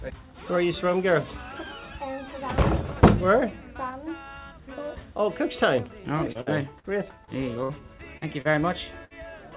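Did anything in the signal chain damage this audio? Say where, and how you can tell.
Yes, two separate problems.

At 5.79 to 5.88 s there's a loud pop, actually a double pop, peaking a few dB above the sound while it carries on underneath. That's an electrical pulse entering the chain, most likely in the analogue wiring from a plug, a switch or a static discharge.

From 6.32 to 9.13 s there's repeated packet loss, which gives it that robotic sound. It's a run of short dropouts, the longest about 59 ms, covering roughly 13% of that stretch. This happened on the network. The jitter buffer filled each hole by stretching the last bit of sound, so it comes out choppy with pieces missing. The G.711 call path's 4 kHz top end sits under all of it.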